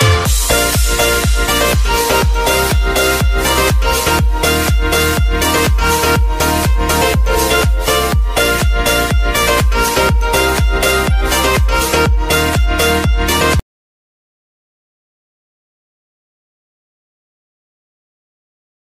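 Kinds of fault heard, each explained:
Audio dropout to silence: at 13.6 s the sound cuts off abruptly and silence, with no room tone at all, runs to the very end of the clip, about 5.2 s of it. This likely means the input was lost while the recorder kept writing zeros, so whatever followed is gone.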